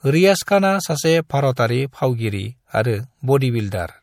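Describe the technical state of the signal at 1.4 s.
At 1.4 s the speech has the smeared, swirly top end of heavy MP3 coding, and nothing sounds above 18.6 kHz, as throughout the clip. This is low-bitrate audio saved at a high bitrate: the texture fits a 64 kbit/s MP3 that was likely later re-encoded at around 192 kbit/s. The larger second file cannot bring back the detail the first encoding discarded, so its artefacts carry through unchanged.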